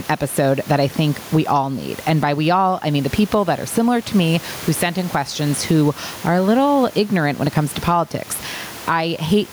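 Across the whole recording the talking sounds squashed, with loud and quiet syllables pressed close together in level. This is gain pumping, and the likely cause is input gain set far too high with a fast limiter or compressor clamping down on every peak, swinging the level by something like 15 dB. The room noise sits about 29 dB below the speech.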